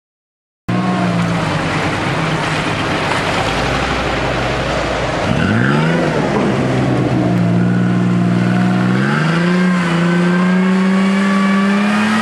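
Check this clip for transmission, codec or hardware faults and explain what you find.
Two faults can be heard: a cut-off start and a run of clock drift buffer slips.

The clip opens on dead digital silence until 0.69 s. Sound then appears abruptly, already partway through, with no attack or fade-in to ease it in. That hard edge is a cut-off start. Capture or streaming began after the sound was already under way, so the first moments were never recorded. The audio is chopped wherever the recording happened to begin.

From 1.28 s to 10.43 s, a click recurs about every 3.06 s, around four times in total. The steady spacing points to clock drift buffer slips. Two devices likely run on independent clocks that differ by something like a hundred parts per million. The buffer between them gradually fills or drains until a small block, roughly fifteen samples, is skipped or repeated, and each of those discontinuities is heard as a click.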